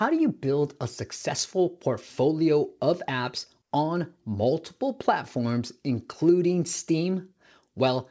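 A speech clip where, from 3.62 to 3.71 s, between "successful portfolio of apps" and "on multiple platforms including", the real background is briefly replaced by comfort noise. That 90 ms patch is steady, featureless and about 6 dB quieter, likely from discontinuous transmission. A spectrogram shows a smooth, uniform band there, and the waveform a lower noise floor. Across the clip, nothing appears above 8 kHz, consistent with a wideband call codec.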